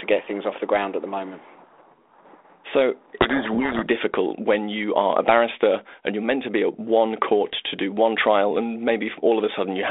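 A codec payload misread runs from 3.21 to 3.87 s, ending just before "difficult when you are". The decoder reads each G.726 code word with its bits in the wrong order and applies the wrong step sizes, so the speech is buried under harsh, grinding distortion within the 32 kbit/s telephone band.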